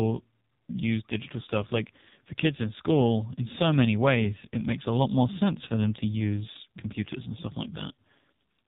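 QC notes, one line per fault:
Throughout, AMR narrowband mobile codec: the speech sounds squeezed through an old phone call, with nothing above 4 kHz, so sibilants go dull and the top end just stops. The voice has that buzzy, robotic edge you get when the codec rebuilds speech from a vocal-tract model and a handful of pulses per 5 ms slot. The damage is heavy, which fits one of the low AMR-NB modes around 5.9 kbps.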